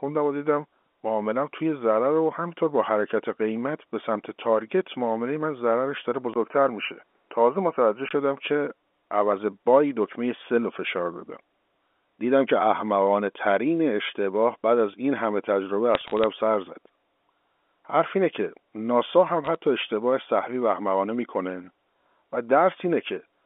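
From 6.34 to 8.11 s the speech turns dull and narrower, with nothing above 3 kHz, after a 20 ms gap. It also carries a new low background noise, while the level stays about the same. This points to the input likely having switched to a poorer device, rather than a filter, because the noise and tone change too.

From 15.95 to 16.24 s and again from 19.45 to 19.55 s, bit errors on the digital phone line add sharp ticks and crackle over speech that stays intact. Unlike dropouts, nothing goes missing. The G.711 telephone band of 250 Hz to 3.5 kHz is heard throughout.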